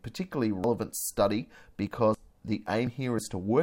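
At 0.64 s the speech jumps forward, losing around 150 ms, most likely a dropped buffer (overrun) where the capture side was overwritten before being read. The waveform shows an abrupt discontinuity with no gap, and the spectrogram shows a thin broadband vertical line. At 1.87 s and 3.18 s, compressed frames are skipped, each time about one 32 ms frame. At each join the audio jumps ahead by about 30 ms.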